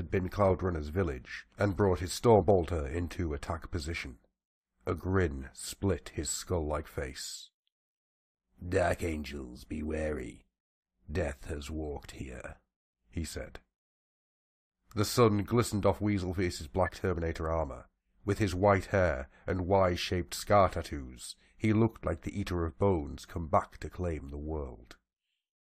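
Compressed frames skipped at 2.40 to 2.42 s, 12.20 s, 16.85 to 16.89 s and 23.88 to 23.90 s: whole frames of the speech are never decoded, so it leaps ahead by about 50 ms at the first two points and about 20 ms at the last two.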